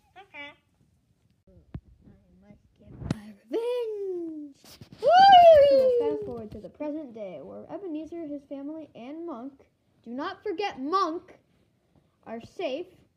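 Nothing is technically wrong with the audio.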